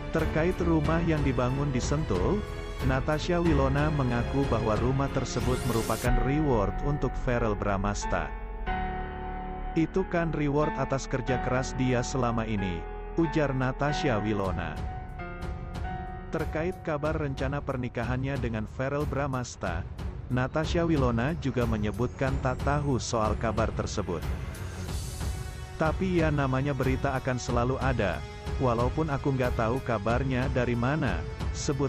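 Nothing audible to flag anywhere in the audio, with no dropouts, glitches, level jumps or timing disturbances at any point.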